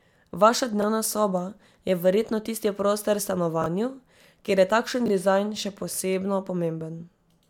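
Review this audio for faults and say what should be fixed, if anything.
Chunks out of order at 0.80–0.84 s, just before "soba je verjetno tisti", 3.62–3.66 s and 5.06–5.10 s: a 20 ms chunk plays one slot late, causing jumbles. Fix by buffering and reordering chunks by sequence number or timestamp before playback or writing.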